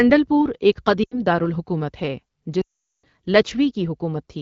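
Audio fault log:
1.03 to 1.20 s, lost AMR speech frames: after "پور ایک", a brief burst of radio errors left the decoder concealing about 80 ms, roughly four 20 ms frames, by repeating the last good pitch and vocal tract settings with falling gain, so the sound drops to near silence within two frames before "دارالحکومت ہے".
2.61 to 3.05 s, lost AMR speech frames: after "دارالحکومت ہے", a much longer run of about 420 ms went missing. The repeated settings quickly drop to near silence within two frames under the AMR wideband (HD Voice) codec's falling gain.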